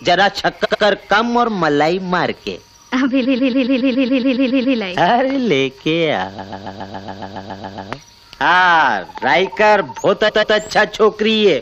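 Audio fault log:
0.64–0.83 s and 10.28–10.55 s, repeated frames: a short block of compressed audio was stored or sent again, so a 93 ms chunk plays three times in a row and a 139 ms chunk plays three times, each adding under a third of a second.
3.24–4.77 s and 6.37–7.91 s, repeated frames: a 139 ms block is replayed eleven extra times, a rhythmic stutter, adding 1.53 s each.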